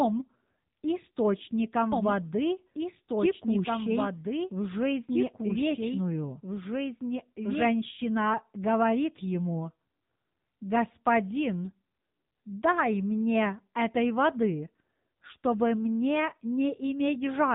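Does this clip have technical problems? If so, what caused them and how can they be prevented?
Yes. The whole recording carries AMR narrowband mobile codec damage. Nothing above 3.8 kHz survives, and the speech is plainly buzzy and synthetic, which points to a low AMR-NB mode around 7.4 kbps. The vocal-tract model rebuilds each frame from a handful of pulses, so fine detail is lost. On a spectrogram, energy stops at a hard ceiling near 3.8 kHz, and harmonics look smeared frame by frame. Prevention: capture over a wideband or lossless path rather than a narrowband phone link.

From 1.92 s to 7.68 s there is a doubled audio track. A full-band second copy of the speech runs about two seconds behind the original and sits a few dB quieter. It has no reverberant tail, and it starts and ends abruptly. This is likely caused by a second, slower capture path or a misaligned edit. The waveform shows overlapping envelopes with sharp onsets and endings at those times, and the spectrogram shows the same patterns repeated two seconds later. 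Prevention: route each source through a single path and check edits for duplicated regions.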